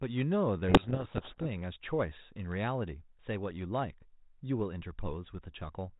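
A codec payload misread runs from 0.68 to 1.47 s. The G.726 code words are read in the wrong bit order, so the decoded differences bury the speech in harsh distortion.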